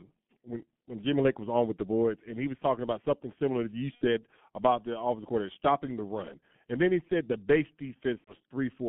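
G.723.1 codec coding runs through the whole of this speech clip. The line is band-limited to roughly 150 Hz to 3.4 kHz, and the heavy coding at about 6.3 kbit/s, with a voice model updated only every 30 ms, leaves the speech muffled and hoarse with smeared consonants. VoIP packet loss concealed by the speech codec occurs from 3.95 to 4.05 s, between "something similar that you" and "about the offensive coordinator", and again from 8.18 to 8.35 s, after "he said the base". About 60 ms and then 90 ms of audio were missing, which fits two and then three lost 30 ms frames. The decoder filled each gap by repeating its last pitch and filter at falling gain, so the sound is stretched into a buzzy tone or coloured noise that fades, and it stays weak or distorted for a short time after the audio returns.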